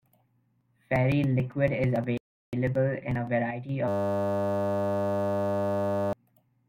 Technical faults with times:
2.17-2.53 rebuffering stall
3.51-3.69 one channel drops out
3.88-6.13 system hang loop

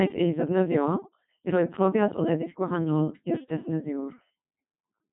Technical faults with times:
0.00-5.12 Codec 2 vocoder

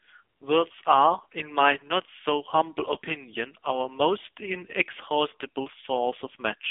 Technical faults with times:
0.00-6.71 AMR narrowband mobile codec

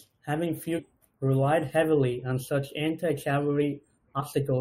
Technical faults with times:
0.78-0.80 damaged data in a compressed stream

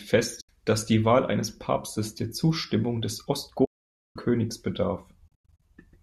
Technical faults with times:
0.41-0.49 AAC frame loss with muting
3.65-4.16 AAC frame loss with muting
5.28-5.62 AAC frame loss with muting

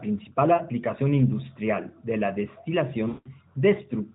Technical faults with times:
0.54-0.63 lost AMR speech frames
3.08-3.32 lost AMR speech frames

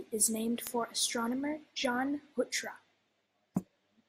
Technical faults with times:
0.28-3.82 word clock ticks

